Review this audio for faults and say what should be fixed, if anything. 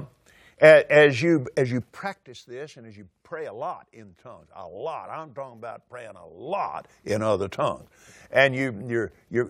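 A level drop of roughly 15 dB was applied in unsmoothed 2 dB steps, about thirty a second, from 1.81 to 2.23 s, after "as you as you" and before "this and as you". Each jump clicks, so zipper noise ticks over the speech while the level falls. Ramping the gain per sample, or interpolating it smoothly across each buffer, would prevent it.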